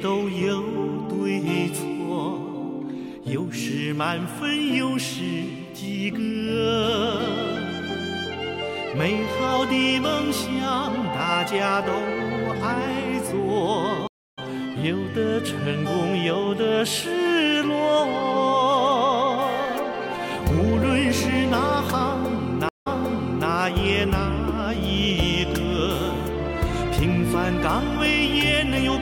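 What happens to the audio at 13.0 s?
Nothing goes wrong at 13.0 s; the audio plays through that moment intact, with no dropout, click or distortion.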